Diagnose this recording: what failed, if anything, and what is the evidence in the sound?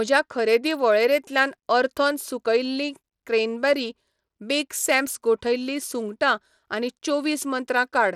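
At the codec stage, likely Bluetooth SBC compression starved of bits, fitting a bitrate near 96 kbps: the speech's treble flickers and turns gritty throughout, with nothing above 17.2 kHz.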